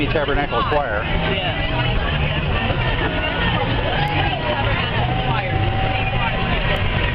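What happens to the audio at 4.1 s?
At 4.08 s there is a bit error spike: a single sample jumps to about -14 dBFS and immediately returns, as if one bit flipped in memory or on a digital link and shifted that value by a power of two. It is heard as one sharp, isolated tick unrelated to the surrounding sound. On a waveform it shows as a lone vertical needle; on a spectrogram, a thin vertical line spanning all frequencies.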